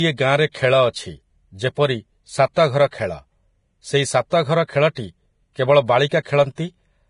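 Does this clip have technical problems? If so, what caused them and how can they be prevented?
Yes. Throughout the speech, the treble sounds hissy and grainy, tones are roughened, and nothing is present above 10.5 kHz. This is likely Vorbis compression at heavy damage, consistent with a low bitrate around 30 kbps. At that setting the encoder lowers its cut-off and quantises the upper spectrum so coarsely that fine detail is replaced by noise of similar energy. Encoding at a higher quality setting, or keeping an uncompressed master, prevents this.

Two brief smears of hiss come just before sharp onsets, from 0.52 to 0.54 s and from 6.09 to 6.11 s, each lasting about 26 to 27 ms, and the attacks that follow sound softened. This is pre-echo. The transform codec spreads quantisation noise across a whole block, so noise scaled for a loud attack near the block's end also fills the quiet moment before it. 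A higher bitrate or an encoder with better block switching for transients prevents it.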